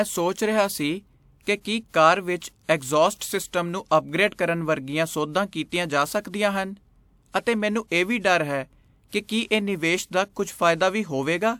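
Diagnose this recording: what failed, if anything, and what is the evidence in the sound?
The codec stage failed, leaving pre-echo ahead of five speech attacks: 1.42–1.47, 2.63–2.69, 3.17–3.21, 7.41–7.47 and 9.47–9.51 s. Each onset is preceded by a short hiss lasting 35 to 57 ms, and the attack itself sounds blunted. The transform coder sized its quantisation noise for the loud part of each block and spread it back into the quiet moment before. Unlike room reverberation or an echo, the smear comes before the sound, not after it.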